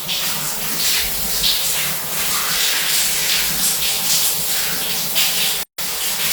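At 5.63 s the sound drops out for about 153 ms, until 5.78 s, then resumes exactly where it left off. This is a gap at a join of encoded pieces. The audio was encoded in separate segments and concatenated without trimming, so the encoder's start-up delay and the padded final frame of the previous segment both remain as silence. The codec smears the edges of the dropout, so the fully silent part is shorter.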